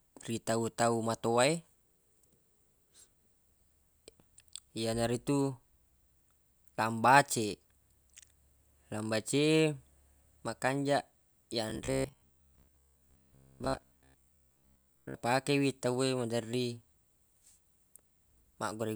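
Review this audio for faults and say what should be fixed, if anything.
From 11.7 to 15.1 s, just before "wi tawwe maderri", the speech becomes a rigid metallic buzz at 66.8 Hz: robotic sound from repeated short buffers, likely from audio arriving late. Most of the stretch replays about 15 ms chunks, visible as identical tiled waveform cycles and evenly spaced horizontal spectrogram stripes. A larger jitter buffer would prevent this.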